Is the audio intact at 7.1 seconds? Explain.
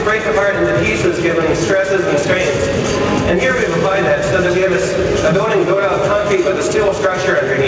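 No. Gain pumping runs through the whole clip, including 7.1 s: the gain swings by around 10 dB, pulled down on every loud sound, likely from excessive gain hitting a fast limiter.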